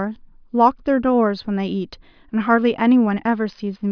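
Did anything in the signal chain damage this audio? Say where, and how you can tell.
No, no stage damaged it.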